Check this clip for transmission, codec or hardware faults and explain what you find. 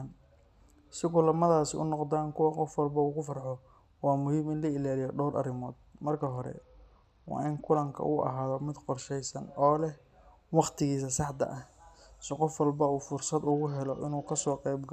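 Two Bluetooth SBC bit pool drops affect this speech, at 6.06 to 7.88 s, just after "la ilaaliyo dhowr arrimood", and at 13.51 to 14.53 s. Each time the link starved the encoder of bits, which fits a fall from bit pool 28 to 9, near 78 kbps. The upper sub-bands lost their share and the remaining ones were coarsely quantised, so the treble goes dull and a gritty noise rises until the rate recovers.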